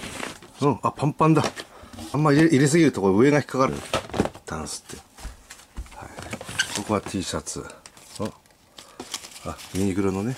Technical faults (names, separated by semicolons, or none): compressed frames skipped